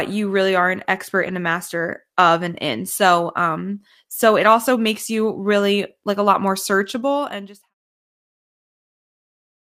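Speech clip with lost packets rebuilt from error correction at 1.23–1.33 s, 4.45 s after "um so it", 6.21–6.23 s after "like a", and 7.85–7.99 s after "searchable and just have". Low-bitrate backup copies fill each gap. They sound briefly rough and noisy rather than silent.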